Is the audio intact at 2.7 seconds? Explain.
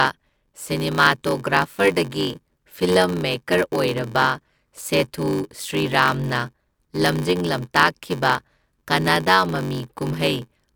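No, not really. At 2.7 seconds you're in the middle of a block size mismatch (padded) that runs through the whole clip. One stage hands over shorter blocks than the next one reads, which fits a 512-sample read, and the leftover space is zero-filled. Those little silent gaps chop the speech at about 93.8 Hz, so there's a steady buzz, and everything plays at about 0.861 times normal speed while the timbre stays.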